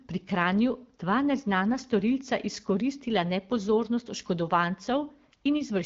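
No technical faults are audible.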